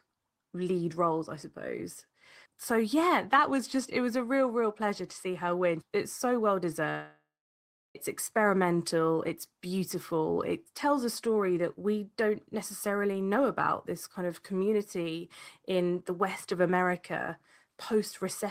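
From 6.89 s to 7.97 s the speech breaks off in a long network dropout. A stretch of incoming audio likely never arrived, so the receiver stretched the last sound into a fading buzz before settling into about 0.7 s of silence. Speech resumes with roughly 1.06 s of material simply gone. On a spectrogram, smeared, repetitive bands taper into an empty gap; the waveform shows a decaying envelope, then a flat line.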